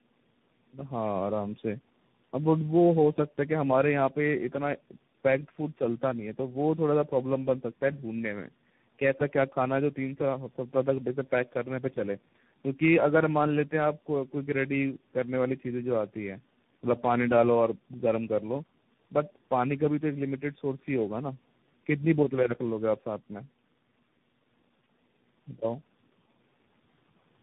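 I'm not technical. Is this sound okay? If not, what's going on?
No. Tandem speech coding runs through the whole clip. The speech passed through three different phone-network speech coders in a row, each re-squeezing the already damaged output of the last. The damage stacks up into rough, muffled, warbly speech, with nothing above 3.8 kHz.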